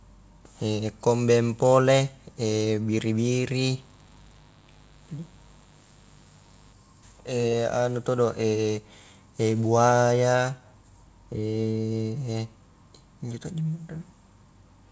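From 3.16 s to 6.73 s the speech carries a mains buzz, a steady raspy tone built on 50 Hz. Hard switching spikes, from a dimmer, a rectifier or an unshielded run, enter twice per mains cycle. That spreads energy into harmonic after harmonic of 50 Hz, so the buzz sounds gritty rather than like a pure hum. It sits well below the speech, roughly 35 dB down. Throughout the clip, nothing comes through above 8 kHz, which points to a wideband call codec.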